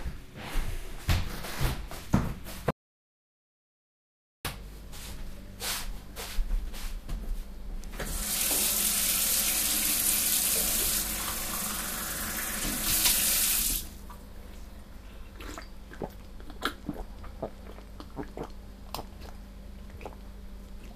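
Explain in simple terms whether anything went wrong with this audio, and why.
Something did go wrong. There is an audio dropout to silence from 2.71 to 4.45 seconds. The sound stops abruptly and comes back just as suddenly, leaving a gap of about 1.7 seconds. That gap is completely dead. Even the faint background hiss of the space is missing. The likely cause is that the input was briefly lost, perhaps through a loose connection or an accidental mute, while recording carried on. Whatever happened during that gap was never captured.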